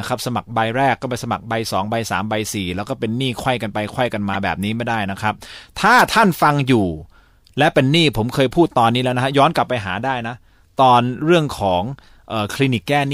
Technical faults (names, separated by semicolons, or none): corrupt frame decoded